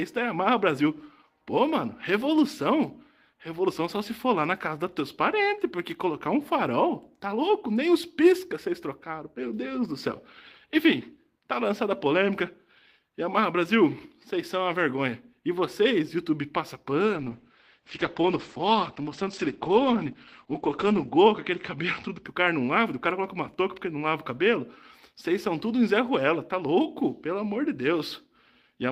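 From 17.15 to 22.29 s the sound turns muffled and coarse, cut off above 8 kHz, caused by a call bitrate drop starving the encoder.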